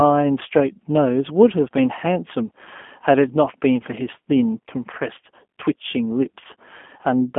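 Speech passed through the G.729 codec throughout. Nothing above 3.5 kHz survives, giving a narrow telephone band. The plainly audible codec damage sounds rough and synthetic, which fits an 8 kbit/s G.729A stream.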